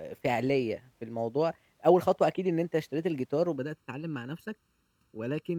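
From about 3.56 s to the end of the speech, one channel runs late by under a millisecond, roughly 0.7 ms, and the two channels are then summed to mono. This channel delay causes comb filtering: the delayed copy cancels against the original at evenly spaced frequencies, with the first notch near 700 Hz and more following higher up. The voice turns hollow and phasey, losing body through that fixed, notched spectrum.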